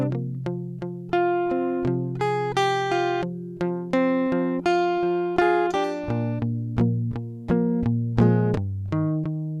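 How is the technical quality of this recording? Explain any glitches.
No technical faults can be heard in this music.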